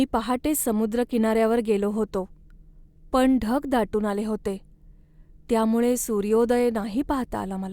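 A speech recording, and nothing technically wrong can be heard in it. No fault turns up anywhere in the clip.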